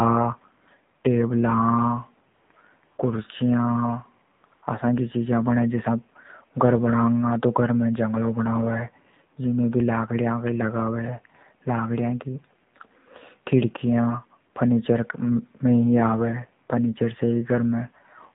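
Throughout the recording the speech passes through the AMR narrowband mobile codec at a low-rate setting, and the plainly audible damage fits a mode of about 7.4 kbps. The signal is sampled at 8 kHz and rebuilt from a vocal-tract model excited by a few pulses per subframe, so nothing above 4 kHz survives. The voice sounds boxed-in and dull, with a buzzy, synthetic edge caused by too few bits to describe the excitation.

Early in the clip, the phone's voice activity detection decides the talker has gone quiet and stops sending speech frames. The receiver then inserts AMR comfort noise built from a rough estimate of the background's level and spectrum. This happens from 2.34 to 2.50 s, from 2.52 to 2.54 s, from 2.84 to 2.98 s, from 4.34 to 4.44 s, from 4.46 to 4.52 s, and from 4.54 to 4.62 s. Each gap lasts 20 to 160 ms, and during each one the real background is replaced by a smooth, steady hiss that switches in and out.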